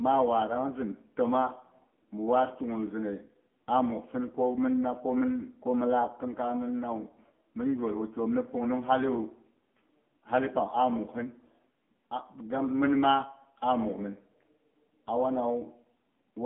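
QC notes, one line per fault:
throughout, AMR narrowband mobile codec: speech passed through a low-rate mobile speech coder, which fits the 6.7 kbps mode. Its sparse-pulse vocal-tract model leaves a heavily buzzy, synthetic voice, confined to 200 Hz to 3.4 kHz, with nothing above 3.5 kHz.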